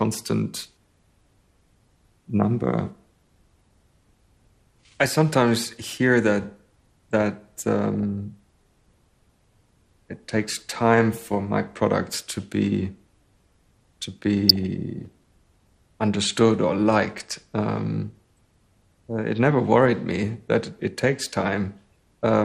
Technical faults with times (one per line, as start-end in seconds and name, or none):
0.00-22.45 MP2 compression
7.94-8.03 DAB burbling
14.49-14.63 DAB burbling
18.32 DAB burbling